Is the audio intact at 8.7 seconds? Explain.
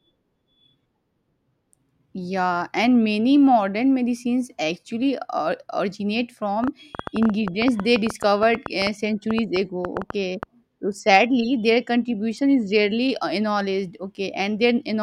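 No. At 8.7 s the speech sits inside a train of clicks running from 6.64 to 10.44 s, ending just before "so sadly their contribution." About thirty same-shaped pulses tick at an uneven pace near 7.65 per second, peaking roughly 10 dB above the speech, likely from nearby interference or a faulty connection or power supply. Their matching shape separates them from random crackle.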